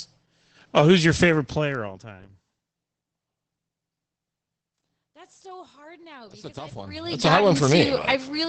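Throughout the speech, the audio has been squeezed through Opus voice compression running its SILK linear-prediction coder at a low rate. The muffled, slightly hoarse and robotic quality, with plainly audible coding damage, fits a wideband SILK stream at around 12 kbps. Nothing survives above about 8.5 kHz, so consonants lose their air and crispness, and the coarse coding of the excitation leaves the voiced sound grainy and hoarse.

From 6.78 to 7.29 s, just after "because I've", the level changes by roughly 20 dB in about half a second. That change is applied as a string of unsmoothed 2 dB jumps, about twenty per second, rather than as a continuous ramp. Each jump puts a small click into the waveform, so the change carries zipper noise: a rapid ticking, zipping texture that lasts exactly as long as the level is moving.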